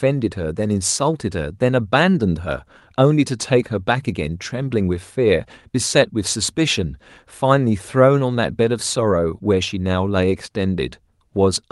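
A speech recording with no technical faults to report. Nothing in it calls for a time or a cause.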